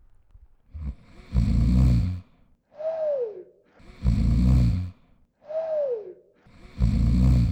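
Nothing stood out on listening to this recording of sounds.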